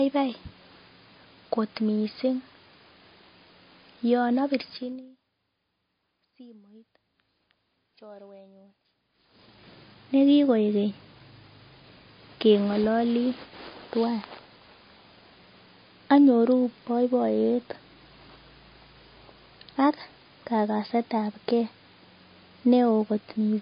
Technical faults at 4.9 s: MP3 compression; zipper noise

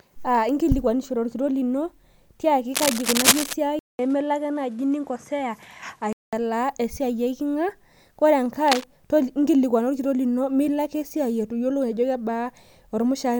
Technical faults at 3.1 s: cable scratch noise

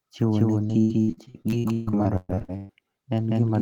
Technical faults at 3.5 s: doubled audio track

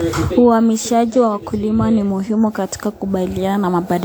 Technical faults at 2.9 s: generation loss

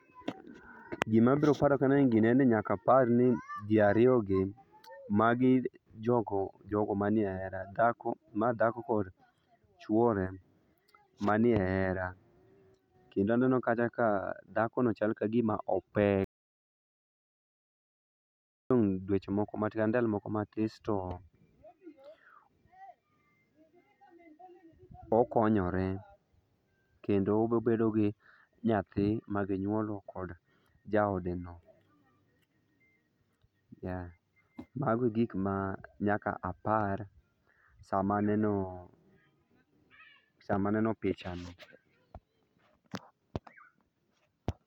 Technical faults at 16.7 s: audio dropout to silence

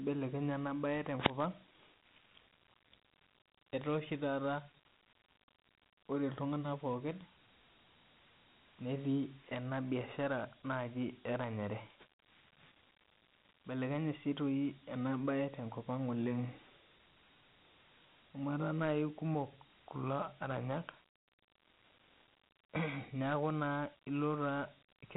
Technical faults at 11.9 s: Dialogic VOX ADPCM

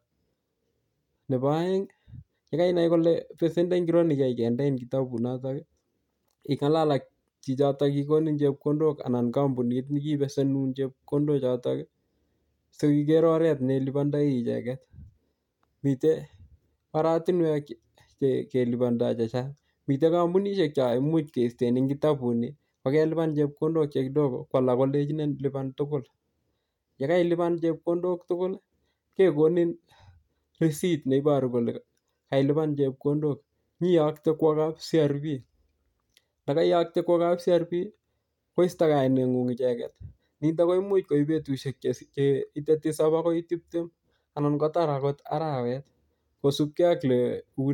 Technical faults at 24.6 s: hard clipping

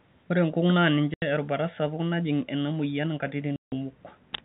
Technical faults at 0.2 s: none

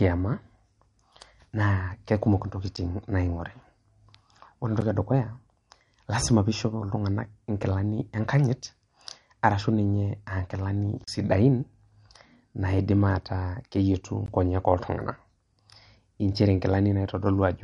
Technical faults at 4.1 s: MP3 compression

